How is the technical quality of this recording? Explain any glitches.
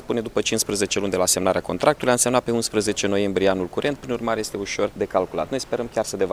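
The recording has one glitch: a short burst of loose connector crackle from 3.83 to 3.96 s, lasting about 0.13 s. A worn or dirty contact somewhere in the signal chain was making and breaking rapidly, chopping the audio on and off many times in that instant. Any DC offset present on the line turns each make or break into a pop. The result is an irregular, scratchy crackle rather than a single click.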